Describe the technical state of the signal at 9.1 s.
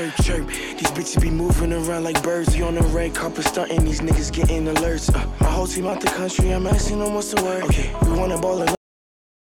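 At 9.1 s the signal is inside a cut-off end. The final buffers of the recording were never written out or played back, so the stream simply stops at 8.75 s and nothing valid follows through to the end at 9.46 s. What you hear is the sound halted in the middle of itself, then dropping straight to digital silence with no natural decay or tail. At 9.1 s there is only that dead silence.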